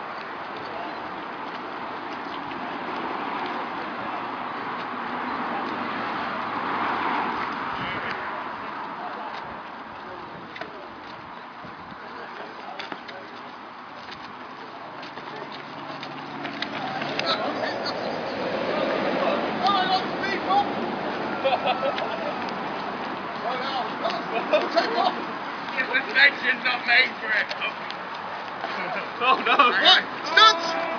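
No technical faults are audible.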